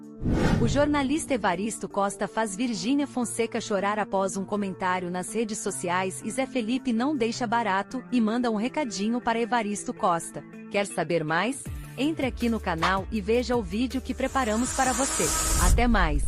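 Nothing stood out as technically wrong on listening to this audio.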